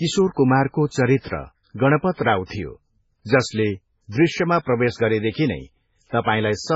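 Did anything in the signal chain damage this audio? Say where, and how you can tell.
Yes. The damage sits at the codec stage and runs through the whole speech clip, most likely MP3 compression starved of bits, with heavy damage that fits a very low bitrate around 16 kbps. Short of bits, the encoder cut everything above 7.6 kHz and dropped weak frequency lines that flicker on and off between frames. That leaves the speech dull at the top, with a watery, swirling texture and metallic chirps on sibilants, and onsets sound smeared rather than crisp.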